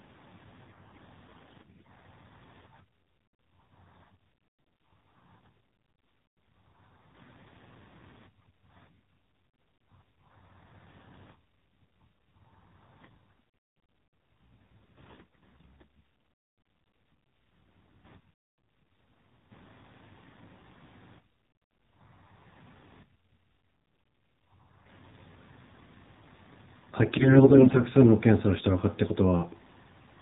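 From start to end the speech has passed through the AMR narrowband mobile codec. Everything above 4 kHz is gone, so a spectrogram shows a hard ceiling at 4 kHz with empty space above it. The speech comes from a coarse vocal-tract model driven by sparse pulses, and at this low rate, which fits the 7.4 kbps mode, it is plainly buzzy and synthetic. Harmonics look smeared rather than cleanly striated.

Three bursts of AMR bit errors follow, at 1.28 to 1.91 s, 15.06 to 15.66 s, and 27.08 to 27.82 s. In each, the weakly protected bits of many consecutive frames arrived corrupted, around one bit in ten in the first two and somewhat fewer in the last. The excitation pulses land in wrong places and the fine pitch, gain and spectral values drift, so the speech keeps its rough pitch and loudness but turns hoarse, scratchy and gargly. The waveform envelope stays roughly intact, while the spectrogram shows broken harmonic lines and scattered, noisy energy below 4 kHz.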